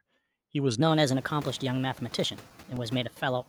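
From 2.24 to 3.16 s, eight CD scratch ticks sound, almost nine per second. A disc blemish wipes out more data than error correction can rebuild on each turn. The player patches the gap, leaving brief clicks of a few milliseconds. Room noise, rising by about 21 dB near 1 s, stays about 23 dB below the speech.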